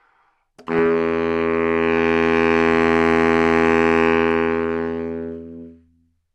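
From 0.79 to 0.86 s short noise blips break in: DAB burbling, as weak-reception bit errors evaded correction and put blips of noise into single sub-bands.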